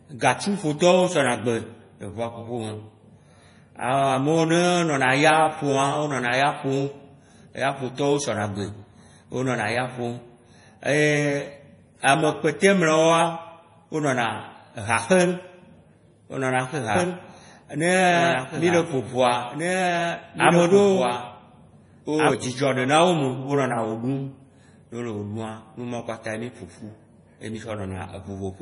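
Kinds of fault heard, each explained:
MP3 compression: throughout, heavy watery, swirly damage with nothing above 10.6 kHz, likely from lossy encoding at a low bitrate, which fits about 32 kbps.
Doubled audio track: from 16.95 to 22.31 s, a full-band copy runs about two seconds behind and about 5 dB quieter, likely from a second path or misaligned edit, starting and stopping abruptly.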